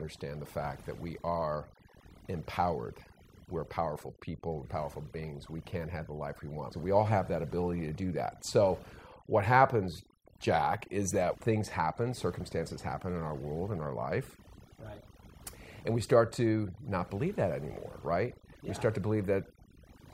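From start to finish the clip carries overdone noise removal: a noise reduction stage was pushed far too hard on a noisy recording, so any frequency band whose level sat close to its noise estimate was pulled right down or switched off entirely. The quieter components of the speech were caught along with the noise. As a result the background collapses into near silence dotted with twinkling specks.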